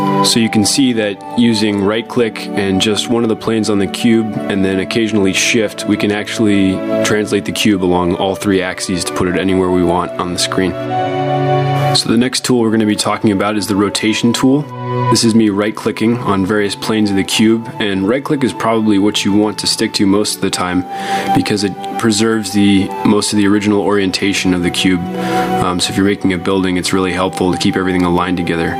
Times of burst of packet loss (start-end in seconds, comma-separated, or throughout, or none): none